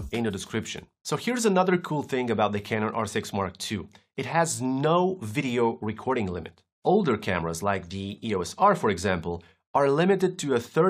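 No technical faults are audible.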